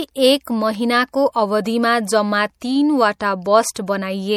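From the first moment to the end, the speech carries plainly audible damage, most likely from MP3 compression. Weak frequency lines drop in and out from frame to frame. That gives a watery, swirling texture. S sounds turn metallic and chirpy, and the onsets of sounds smear. The amount of damage fits a low bitrate of around 64 kbps.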